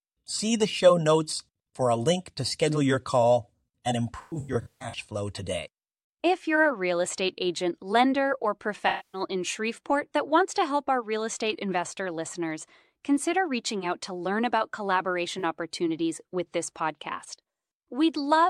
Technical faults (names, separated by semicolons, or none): AAC frame loss with concealment